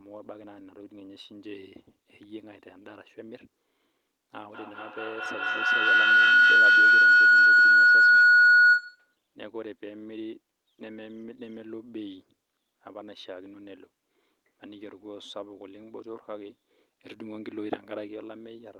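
From 4.49 s to 9.2 s a feedback howl builds as a loudspeaker on the call feeds the microphone. Unlike echo, the repeats grow rather than fade, coming every fifth of a second or so and narrowing to a tone near 1.5 kHz, peaking about 21 dB above the speech.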